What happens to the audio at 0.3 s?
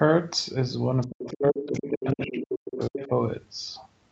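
Nothing goes wrong at 0.3 s: the speech there is intact, carried cleanly through the normal call chain, whose Opus coding keeps nothing above about 8 kHz.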